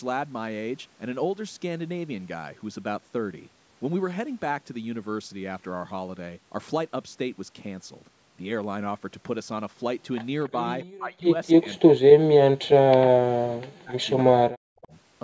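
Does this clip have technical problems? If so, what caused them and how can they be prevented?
Yes. Speech is suppressed in double talk at 10.5–10.56 s, 10.94–11.36 s, 11.56–13.97 s and 14.23–14.93 s. The first dip is slight, and the later ones nearly silence it. Likely cause: the echo canceller mistook the talker for far-end echo. Better echo cancellation with reliable double-talk detection, or a headset, would prevent it.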